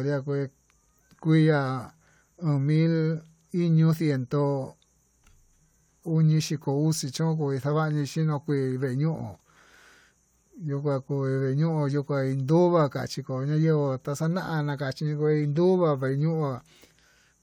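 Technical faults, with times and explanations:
No technical faults are present in this speech recording; the signal carries no dropouts, distortion, noise bursts or timing errors at any point.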